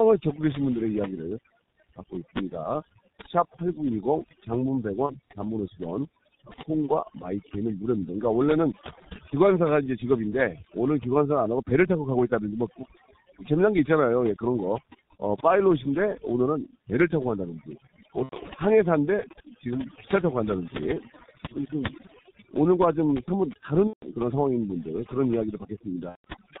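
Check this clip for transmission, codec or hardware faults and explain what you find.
Three faults are present in this speech: overdone noise removal and heavy G.723.1 codec damage throughout, plus four short packet-loss gaps.

Overdone noise removal runs the whole clip. The suppressor cuts individual frequency bands hard whenever they sit near its noise estimate. Quiet parts of the speech vanish with them. Pauses drop to near silence with twinkling specks.

The G.723.1 codec is also present throughout, with heavy damage. The sound fits its low rate of about 6.3 kbit/s. Nothing passes above 4 kHz, and its slow-updating voice model smears transitions. Speech sounds muffled and hoarse, with blurred consonants.

VoIP packet loss concealed by the speech codec occurs at 5.06–5.14, 18.23–18.36, 23.87–24.09 and 26.09–26.24 s. The gaps fit roughly 30, 90, 150 and 150 ms of missing audio. The decoder extends its last pitch and filter while fading the gain. 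Each gap becomes a buzzy or noisy smear, muted from the third lost frame in the last three gaps, and the speech stays weak briefly afterwards.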